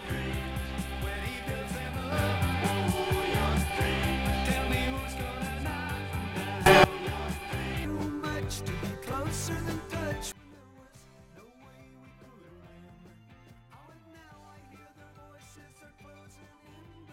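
The audio lurches in level three times: up about 6 dB from 2.12 to 4.9 s, up about 21 dB from 6.66 to 6.84 s, and down about 20 dB from 10.32 s to the end, with background noise shifting alongside. These are sudden gain jumps, likely from digital gain applied without a ramp.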